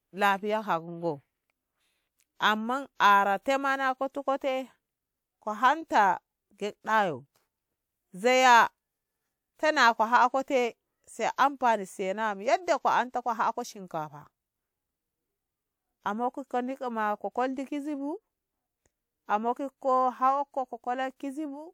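Pre-echo appears at 3.42 s, running to about 3.46 s, roughly 38 ms of short hiss just ahead of a sharp attack in the speech. The codec spread quantisation noise sized for the loud onset across the whole block, so the quiet moment before it fills with noise and the attack sounds smeared.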